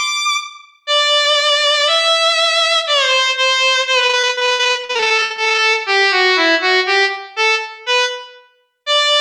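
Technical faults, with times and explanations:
4.07–5.60 s, repeated packet loss (robotic sound): over this 1.5 s stretch the stream breaks up into a rapid series of short dropouts, none longer than 63 ms. About 0.66 s is patched by extending the preceding sound, 43% of the span, and about 0.68 s is simply absent. Because each repair is followed almost immediately by another hole, the repeated synthetic extensions give a choppy, robotic texture with fragments missing.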